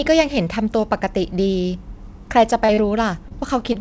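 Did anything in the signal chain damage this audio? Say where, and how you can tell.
Yes. The network stage lost audio, and the receiver concealed it. There was short concealed packet loss at 2.66–2.71 s, 2.74–2.80 s and 3.28–3.33 s. Each time about 30 ms never arrived. The decoder continued the last sound for 20 to 28 ms, then blended back. Each gap is heard as a brief smear or wobble.

There is also a short stall from a late packet at 3.73–3.77 s. The packet came late, and the jitter buffer ran dry. The receiver stretched the last sound by about 17 ms, then resumed from the same point. Nothing is lost, but that sound is held slightly too long.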